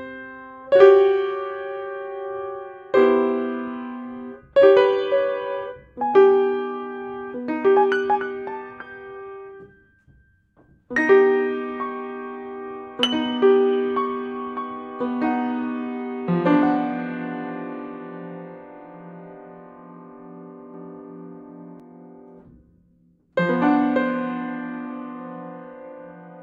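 From 20.74 s to 21.80 s the audio carries a doubled audio track: a second, full-band copy of the same sound runs about half a second behind the first, at roughly the same level. The likely cause is the signal being picked up again through a slower route and summed back in. The trailing copy has no decay or room colouring, so it reads as a distinct repeat rather than an echo, and it cuts in and out abruptly.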